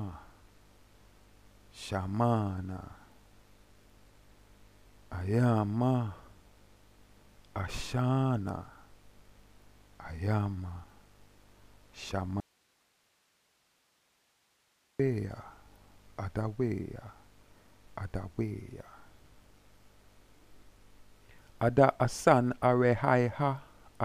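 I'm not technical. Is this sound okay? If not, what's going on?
No. There is an audio dropout to a faint residue from 12.40 to 14.99 seconds. For about two and a half seconds the sound cuts out abruptly, leaving only a soft hiss far quieter than the audio around it, and then snaps back in mid-flow. It isn't a natural pause or fade. The likely cause is that the signal feeding the recording was briefly lost while the equipment after it kept running, so it captured only its own background hiss.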